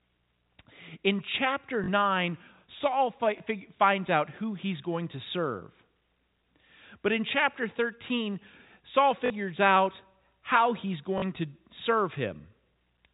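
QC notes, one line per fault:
1.84–1.88 s (after "in chapter"), 3.38–3.40 s, 9.26–9.30 s (before "out how he's"), 11.18–11.22 s (after "out how he's"): packet loss with last packet repeated. Gaps of 40, 20, 40 and 40 ms, fitting 20 ms packets, are filled by replaying the previous chunk. The two-packet runs sound like short robotic stutters, and the single repeat like a small blip. The waveform shows copied blocks with sharp joins, and the spectrogram shows vertical broadband streaks.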